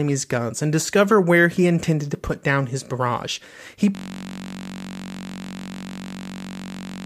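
At 3.95 s the speech gives way to a system hang loop that runs to the end of the clip. Playback froze while the hardware kept replaying one 21.33 ms slice, which fits a 1024-sample buffer, producing a steady 46.9 Hz buzz.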